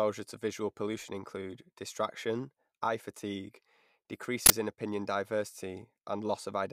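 An uninitialised buffer plays from 4.46 to 4.50 s: a 40 ms block sent out before any audio was written, so leftover memory becomes a harsh, loud burst of digital noise.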